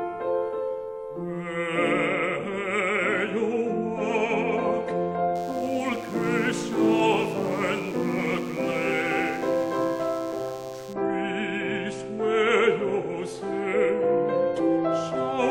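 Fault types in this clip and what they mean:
DECT cordless phone buzz: a nearby DECT handset's 10 ms radio bursts, rectified into a thin 100 Hz buzz from 5.35 to 10.93 s, about 25 dB below the audio, appearing as evenly spaced harmonic lines.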